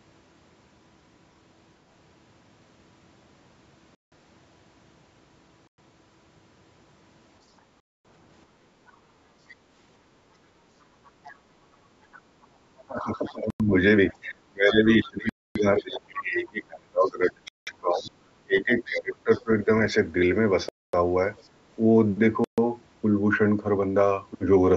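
Speech drops to clean silence at 3.95, 5.67 and 7.80 s, for 0.17, 0.11 and 0.25 s. These are Bluetooth stalls, likely from interference draining the headphone buffer. Unlike a gate, the room noise vanishes too, and then the sound resumes.

From 8.70 to 9.72 s the background is gated by the echo canceller: room sound dips by about 6 dB for roughly 0.4 s in total.

Within that span, from 8.87 to 9.55 s, faint other-side voice leaks through at about 30 dB below the speech. It is likely residual loudspeaker echo the canceller missed, and it sounds like a separate voice rather than a dropout. The leak returns at 11.24 to 12.21 s (about −25 dB), 13.26 to 16.00 s (about −20 dB) and 17.06 to 19.42 s (about −25 dB).

From 12.87 to 19.69 s the speech is suppressed in double talk. The talker's own voice sinks by up to about 25 dB, for roughly 4 s in total, while the other side speaks. This is likely the canceller ducking both voices together. 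Unlike a stall, the voice dips rather than cutting to silence.

Bluetooth stalls recur inside this stretch at 13.50, 15.29 and 17.48 s, lasting 0.10, 0.26 and 0.19 s, and again at 20.69 s for 0.25 s.

A brief echo scrap at 21.41 to 21.48 s, about 40 dB down, is followed by a 40 ms double-talk dip of about 15 dB at 21.54 to 21.58 s.

A final stall at 22.44 s silences the audio for 0.14 s.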